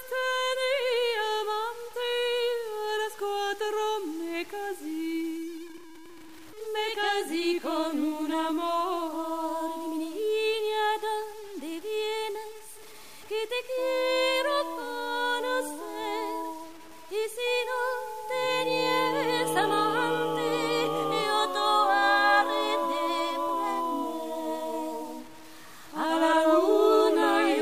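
A grainy, gritty distortion rides on the sound for the whole clip, and it changes character as the sound does. Quiet passages turn rough and sputtery, and the softest moments break up or drop out rather than fading smoothly. The error sits only about 25 dB under the signal. The likely cause is low bit depth without dither: the audio was truncated to a coarse set of levels, which fits a 7-bit signal, so the rounding error tracks the sound instead of becoming a steady hiss.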